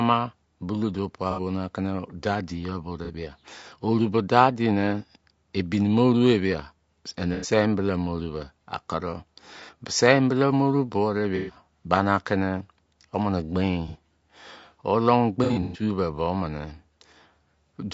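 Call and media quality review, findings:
Low-delay AAC compression, full clip: rough, grainy speech with noise filling gaps between harmonics and a thin, synthetic top band. On the spectrogram, blurred harmonic lines and a smeared upper region. Likely AAC-ELD at a bitrate near 32 kbps.

AAC frame loss with concealment at 1.31–1.39, 3.05–3.10, 7.34–7.49, 9.65–9.69, 11.36–11.56, 13.88–13.96, and 15.44–15.82 s, the last a scattered cluster over 0.3 s with runs up to about 100 ms. Smeared, noisy, phasey patches where the decoder repeats the last spectrum. Spectrogram shows smeared harmonics.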